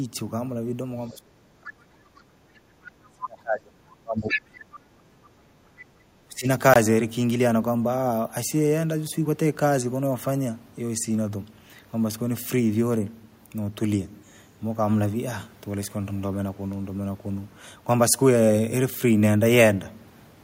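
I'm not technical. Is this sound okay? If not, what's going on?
No, this speech recording has three kinds of trouble.

Other side's voice leaking through, at 1.08 to 1.14 s, 3.04 to 3.08 s and 4.27 to 4.42 s: a second voice slips in behind the talker. The first two scraps are very faint. The one around 4.3 s is nearly as loud as the talker. The likely cause is the talker's device playing the other person on its loudspeaker, with the echo remover failing to wipe all of that out of the microphone.

Speech suppressed in double talk, from 1.09 to 2.67 s, 3.08 to 5.96 s and 6.27 to 6.48 s: the talker's voice sinks deeply. The longest stretch lasts about three seconds. These dips match moments when both people were likely talking at once. The echo remover couldn't tell the talker from the loudspeaker echo, so it turned everything down together.

Bluetooth stall, at 6.74 to 6.76 s: the sound drops to silence for about 22 milliseconds, a tiny gap, and then carries on. 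The likely cause is radio interference delaying the wireless link to the headphones. Their small store of audio ran out, and playback paused until the missing pieces arrived.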